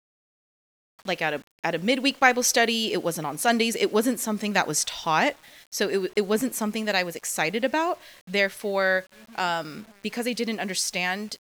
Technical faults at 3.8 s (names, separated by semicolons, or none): low bit depth without dither